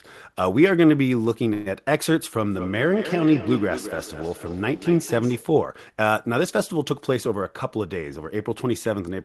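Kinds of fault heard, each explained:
Call audio freeze: at 1.53 s a 124 ms fading fill of buzz or hiss holds the sound, then it resumes with nothing lost, likely packets stalling and the jitter buffer running dry.
Feedback echo between two devices: from 2.51 to 5.60 s another device replays the speech back into the mic, repeating about every fifth of a second at around -11 dB.
Jitter buffer speed-up: from 6.91 to 8.69 s the receiver trims tiny pitch-period slices, about 150 ms in all, so speech runs 7% faster at unchanged pitch.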